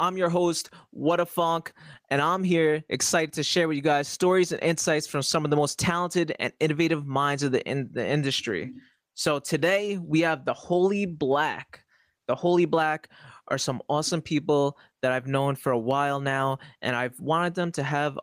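Input gain set far too high for the microphone, with a fast limiter or compressor clamping down on each loud peak, is the likely cause of the gain pumping that runs through the whole of this speech recording. Each time the speech gets loud, the level is yanked down by around 10 dB. Loud and quiet passages end up squeezed together, giving a flattened, breathing sound.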